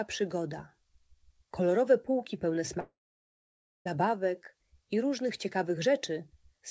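A long network dropout from 2.80 to 3.87 s removes about a second of sound. The last audio is drawn out into a fading buzz, then about 0.93 s of silence follows before playback resumes past the gap, likely because packets never arrived.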